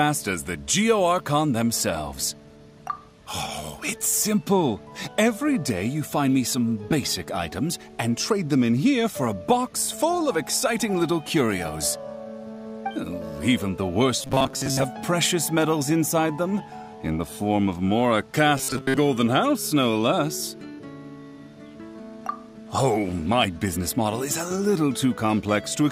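From 14.21 to 14.84 s, the sound turns into a rigid, metallic buzz. It returns from 18.58 to 18.97 s. Both are robotic sound from repeated short buffers. The buzz sits at a fixed 133 Hz, which points to a repeated slice of about 7.5 ms. The likely cause is audio arriving too seldom, so the last short buffer is replayed. Most of the real audio in those spans is lost.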